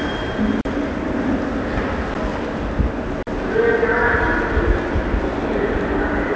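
Short holes break into these everyday sounds at 0.61–0.65 s and 3.23–3.27 s, with a tick at 2.14 s. These are blocks of digital silence: the output dropped to silence with no fade for 39 ms, 11 ms and 43 ms, gaps that fit 512- and 2048-sample buffers not filled in time. At 2.30 s and 4.82 s a brief stutter-click recurs. This is overlapping chunks: pieces spaced 2.5 s apart each began 19.5 ms early, so that slice plays twice at the join. Through the G.722 call path at 64 kbps, nothing is heard above 8 kHz.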